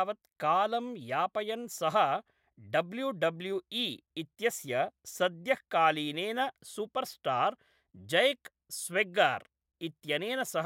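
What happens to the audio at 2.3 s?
Nothing goes wrong at 2.3 s; the speech there is intact, with no dropout, click or distortion.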